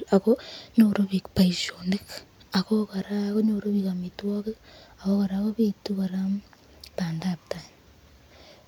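No technical faults can be heard anywhere here.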